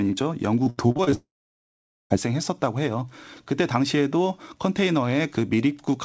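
From 0.64 to 1.14 s, repeated packet loss leaves seven gaps, the longest 76 ms. Each is patched by repeating the last sound, so about 40% of the stretch comes out choppy and robotic.

From 1.14 to 2.12 s, a long network dropout is the likely cause of 960 ms of audio going missing. The concealment fades out quickly, leaving about 830 ms of silence before the sound resumes with that part gone. Throughout, nothing reaches above 8 kHz, which fits the G.722 call codec at 64 kbps.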